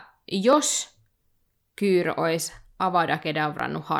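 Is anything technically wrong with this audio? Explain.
Yes. From 0.53 s to 3.60 s, periodic USB or driver dropouts skip roughly a millisecond of speech every 1.02 s, about four times. Each gap that falls on speech leaves a tick, seen as a waveform discontinuity and a thin broadband spectrogram line.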